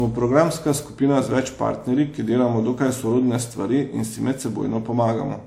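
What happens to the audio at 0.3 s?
At 0.3 s the speech already carries generation loss, and it persists through the whole clip. The sound is swirly and hollow, with consonant attacks smeared and the top end stopping near 19.9 kHz. A single encode at a rate that fits 128 kbit/s would not sound this degraded. The likely cause is around five successive WMA passes, each re-quantising on a shifted frame grid so that noise piles up.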